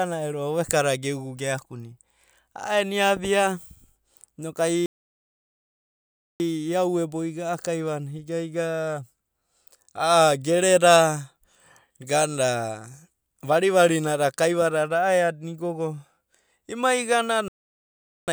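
At 4.86 s the speech cuts to silence in mid-flow for 1.54 s, resuming at 6.40 s; a second gap of 0.80 s runs from 17.48 to 18.28 s. Both are playback stalls, likely the player running short of data or being blocked.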